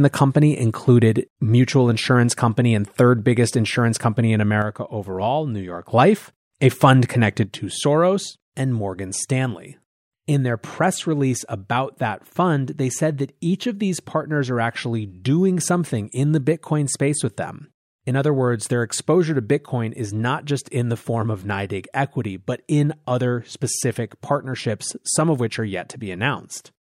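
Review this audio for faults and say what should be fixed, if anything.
The speech drops abruptly by about 6 dB from 4.62 to 5.89 s. It drops again at 7.45 s and stays down to the end. The likely cause is one channel dropping out. When one side of the stereo pair goes silent, the mono sum keeps only half of what both sides shared. Anything carried by the lost side vanishes. Prevent it by securing cables and connectors and monitoring both channel meters during recording.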